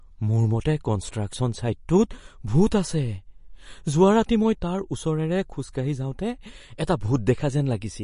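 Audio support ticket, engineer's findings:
Whole clip, start to end: speech sounds dull and watery, with nothing above 10.6 kHz. Likely MP3 compression, and heavy enough that the damage is plainly audible; fits a low bitrate around 40 kbps. The encoder chopped the treble flat at a fixed cutoff and, running short of bits, dropped weaker detail. Worth checking the encode settings on that path, mate.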